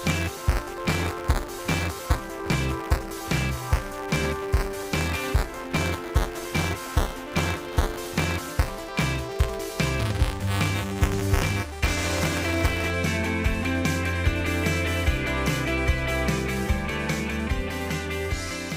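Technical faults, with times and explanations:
0.0 to 12.91 s, buffer tearing: a rattling 200 Hz buzz rides on the sound. Writer and hardware reader have slipped out of step, so a small slice of each period, under a tenth, replays audio from roughly 15 ms earlier, hard-joined at both edges.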